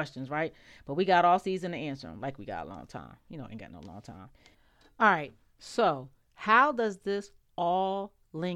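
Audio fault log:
No audible faults detected.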